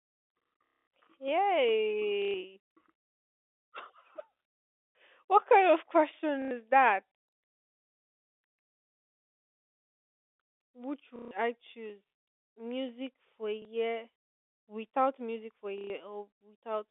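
Speech over a G.711 telephone line suffers packet loss with the last packet repeated: the receiver replays stale audio at 0.66, 2.22, 4.94, 6.42, 11.16, 13.62 and 15.78 s. Each run of repeats gives a robotic stutter whose buzz, near 33 Hz, fits 30 ms packets, while the single repeat at 13.62 s is a small blip.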